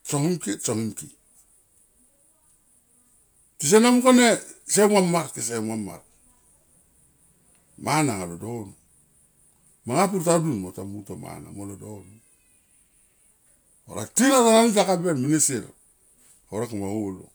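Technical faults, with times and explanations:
Nothing stood out as a technical fault on listening to this speech recording.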